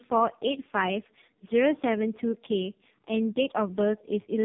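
Tandem speech coding runs right through the speech: it went through two low-rate speech coders in a row with plain telephone coding between, which fits AMR-NB at 7.4 then 5.9 kbit/s. The second coder worked on the first's leftovers, so it's rough, muffled and warbly, with nothing above 3.6 kHz.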